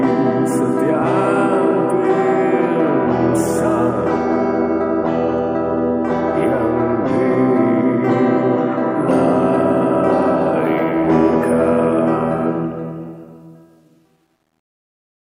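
From 12.43 s to the end at 15.27 s, the fade shows truncation distortion: the fade stage discards low-order bits without dither, which fits a 10-bit word length, so the decaying waveform collapses into coarse steps. The tail turns gritty, worst from 13.46 s onward.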